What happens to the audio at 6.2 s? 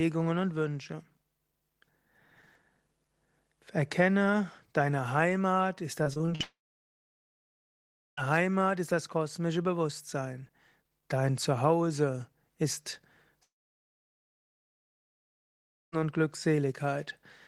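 At 6.2 s the speech goes through repeated packet loss, giving a robotic sound from 6.03 to 6.42 s. Five gaps fall in that stretch, the longest 43 ms. Each is patched by extending the preceding sound. Roughly a third is concealed, so it turns choppy with pieces missing.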